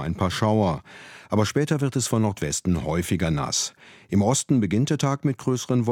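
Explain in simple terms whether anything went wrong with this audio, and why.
Nothing went wrong here.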